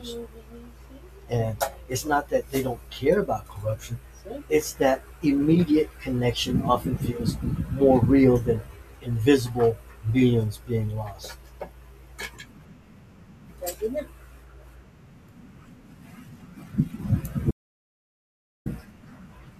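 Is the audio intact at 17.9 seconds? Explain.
No. At 17.9 seconds you're inside an audio dropout to silence running from about 17.51 to 18.66 s. The speech cuts off mid-flow into silence with no room tone, most likely a lost input or stray mute, and roughly 1.15 s is simply gone.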